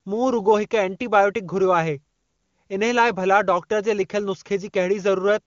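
Nothing's technically wrong with this bit of speech: it's carried over the AMR wideband (HD Voice) codec at its top rate of 23.85 kbit/s, where the codec leaves speech clear, so there's no problem to point to anywhere in it.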